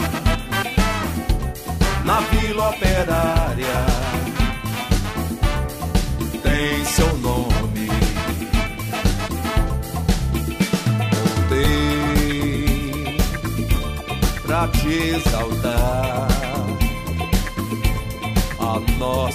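Two brief jumbled blips break the audio, at 11.64 to 11.66 s and 13.75 to 13.77 s. Each is chunks out of order: a 10 ms chunk arrived one chunk late and played after its successor, leaving three abrupt joins.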